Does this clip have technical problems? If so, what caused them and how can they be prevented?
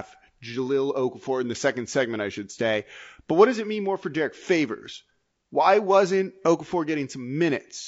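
Yes. Low-delay AAC compression runs throughout the speech, which sounds plainly rough and grainy, with noise between the pitch harmonics. The likely cause is AAC-ELD coding at a rate that fits about 32 kbps, whose short frames resolve harmonics poorly. Raising the bitrate prevents it.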